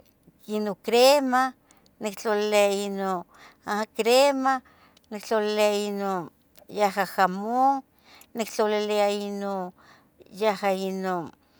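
No technical faults occur at any point in this speech recording, so there is nothing to describe in time order.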